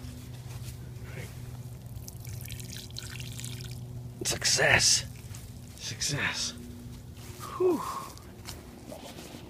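Nothing in this recording stands out as a technical fault, so there's nothing to flag here.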